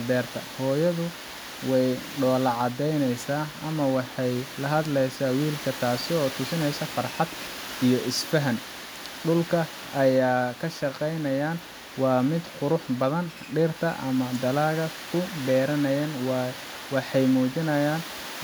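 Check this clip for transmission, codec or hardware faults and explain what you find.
Nothing in the speech points to a transmission, codec or hardware fault.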